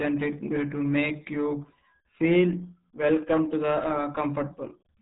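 Throughout, the speech carries RealAudio 14.4 codec damage: a very low bitrate, consistent with 8 kbit/s, removes everything above 3.8 kHz, leaving heavily muffled, gargly, smeared sound.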